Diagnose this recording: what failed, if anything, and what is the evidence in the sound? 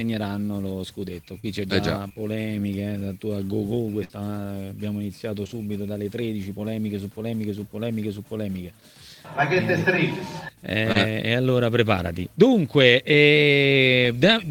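The network path failed repeatedly, leaving short concealed packet loss at 1.39–1.45 s, 2.09–2.12 s, 5.44–5.47 s and 10.92–10.97 s. Each is a brief smear or wobble where the decoder, missing 20 to 40 ms of audio, extended the preceding sound and cross-faded back into real signal. On a spectrogram the patch shows as frozen or smeared spectral content with no new onsets. On the waveform it is a repeated, smoothly joined cycle pattern.

One burst of packet loss sits at 4.04–4.13 s, also a network-stage failure. Here 60 ms of audio never arrived, and the receiver bridged it with about 52 ms of synthesised continuation that decays as it runs, a held buzz or a fading hiss depending on the preceding sound. On a spectrogram that looks like a stretched band fading in energy, followed by an abrupt resumption later in the material. The waveform shows a decaying envelope, then a jump.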